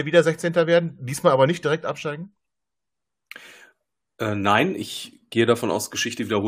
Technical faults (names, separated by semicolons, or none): none